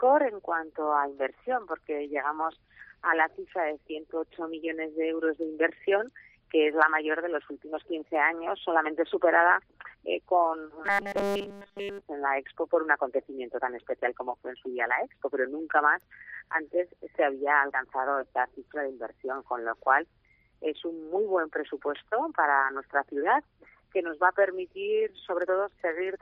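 Audio likely stopped arriving in time from 10.85 to 12.01 s, so the playback kept looping a tiny buffer of about 5 ms in place of essentially all the real signal. This produces robotic sound from repeated short buffers: a rigid, metallic 200 Hz buzz locked over the sound.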